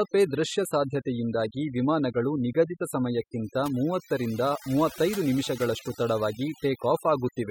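Overdone noise removal runs through the whole recording. The noise reduction was set too strong. It pushes any frequency band near its noise estimate far down or out, taking quiet parts of the voice too. Pauses fall to near silence with twinkling specks.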